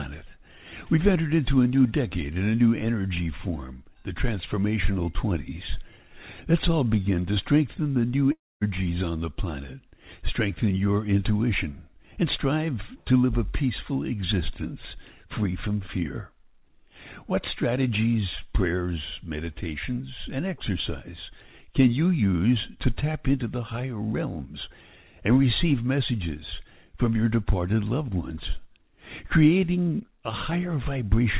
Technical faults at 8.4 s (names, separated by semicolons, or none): long network dropout